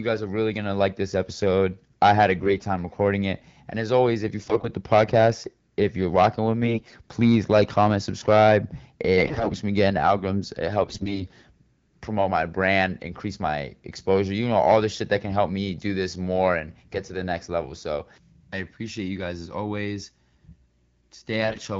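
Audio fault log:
2.40–2.67 s, 4.39–4.69 s, 6.64–6.96 s, 9.17–9.57 s, 10.82–11.27 s and 21.44–21.60 s, AMR bit errors: The speech turns hoarse, scratchy and gargly in each burst. Pitch and loudness hold roughly steady. The first follows "episode I had a". The third follows "if you're rocking with". Flipped low-priority bits misplace the excitation pulses and skew pitch, gain and spectral detail. Errors run from about one bit in twenty to one in seven, worst in the last two bursts. The wideband codec underneath sounds clear, which fits 12.65 kbit/s.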